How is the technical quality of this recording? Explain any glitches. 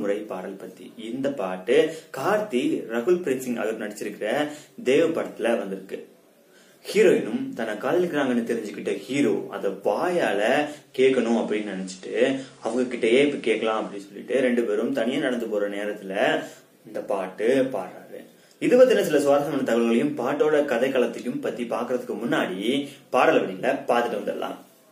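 The recording has one glitch. From 10.77 to 14.21 s, the digital radio blends to analogue. The receiver lost its digital stream and cross-faded over 348 ms to the station's FM signal. The level shifts by about 2 dB, and faint hiss appears around 35 dB down. On a spectrogram, a grey noise floor fills the gaps. On the waveform, there is a small step in level.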